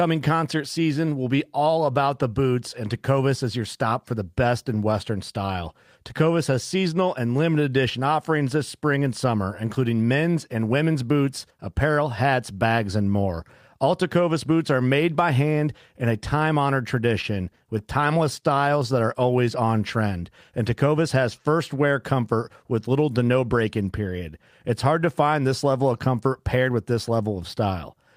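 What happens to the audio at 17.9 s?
Around 17.9 s the speech picks up brief ticks, smears and small hiccups, part of a run of scattered short gaps between 17.21 and 18.44 s, just after "in a time honored" and ending before "that are always on". Roughly seven tiny holes appear, the longest around 30 ms, together about a tenth of a second. Lost or late packets left each hole, and the receiver bridged it by extending the preceding sound.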